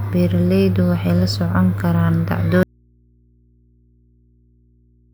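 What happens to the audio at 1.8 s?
Nothing goes wrong at 1.8 s; the speech carries on intact through that moment with no dropout, click, distortion or other fault.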